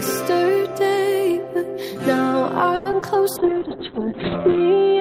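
From 2.75 to 2.87 s there is a call audio freeze, likely packets held up in transit so the jitter buffer ran empty. The last sound is stretched into a fading buzz or hiss for about 100 ms, and the audio then resumes where it stopped, with nothing lost.

Right after, at 2.91 to 2.94 s and again at 3.00 to 3.04 s, comes short concealed packet loss. Both times about 40 ms of audio never reached the decoder in time. The receiver patched each hole by extending the preceding sound before blending back, which leaves a quick smear or wobble.

From 3.37 s to the end, a call bitrate drop takes the encoder from 64 down to 6 kbps as the bandwidth estimate collapses. The coding coarsens and the upper limit falls from 20 kHz to 4 kHz, so the sound turns muffled and rough.

Overlapping this, from 3.43 to 3.90 s, a jitter buffer slow-down repeats small pitch periods to rebuild its reserve, adding about 55 ms. 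Playback runs at 90% speed with unchanged pitch, so sounds are drawn out.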